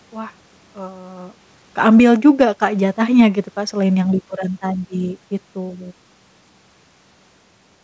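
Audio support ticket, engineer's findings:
AGC gain falling, 1.67–2.22 s: gain pulled down about 4 dB over roughly half a second; speech and room noise sink together.
AGC gain rising, 2.22–3.57 s: gain restored about 4 dB gradually; speech and background swell back before "kan selain yang liburan".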